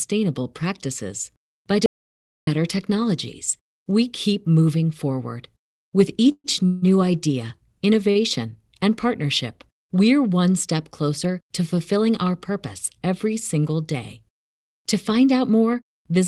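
At 1.86 s, just after "practices by", an audio dropout to silence cuts the speech off for about 0.61 s until 2.47 s. The gap is silent with no room tone, likely a lost input while recording continued, and whatever was said there is gone. Unlike a call freeze, nothing is stretched or buzzing.

Two call audio freezes follow, at 6.32 to 6.46 s and 6.66 to 6.84 s. Each likely comes from packets held up long enough to empty the jitter buffer, so the last sound is continued as a fading buzz: about 123 ms in the first, ending in roughly 50 ms of silence, and about 160 ms in the second. The speech then resumes where it stopped, so a pause is inserted rather than content lost, which separates these from the dropout.

At 8.11 to 8.17 s a short stall from a late packet holds one sound about 45 ms too long with a slight buzz or dip, then carries on intact. It is briefer than the freezes and never fades toward silence. 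Throughout, the call codec path limits the top end to around 12 kHz.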